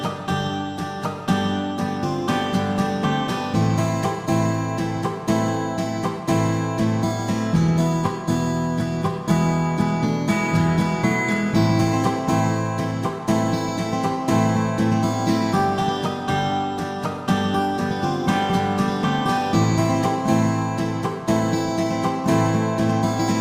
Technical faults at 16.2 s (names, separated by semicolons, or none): none